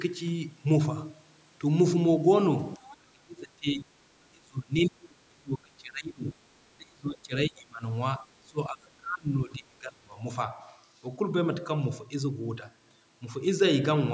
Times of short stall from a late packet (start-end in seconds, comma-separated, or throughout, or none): none